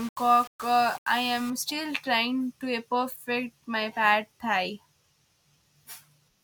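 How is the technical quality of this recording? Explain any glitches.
The recording has one glitch, at the start. From 0.00 to 1.50 s the speech is grainy, with distortion riding on each sound, about 20 dB below it. The likely cause is low bit depth without dither, rounding to roughly 6 bits.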